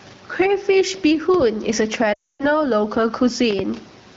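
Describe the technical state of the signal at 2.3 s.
At 2.3 s the signal sits inside a burst of lost AMR speech frames running from 2.13 to 2.45 s, with about 260 ms of speech missing. Corrupted frames failed their checksum, so the wideband decoder kept repeating its last good pitch and vocal-tract settings at steadily lower gain. The sound drops to near silence within two frames, then returns thin and rough. On a spectrogram, the harmonics flatten into unchanging horizontal bands and then fade out. The waveform envelope decays to almost nothing before speech resumes.

Gain pumping is also present here, as it is across the whole clip. The level swings by around 10 dB, with loud and soft parts pulled closer together. This is likely an over-driven input being pulled down by a fast limiter or compressor. On the waveform the peaks look flattened and uniform.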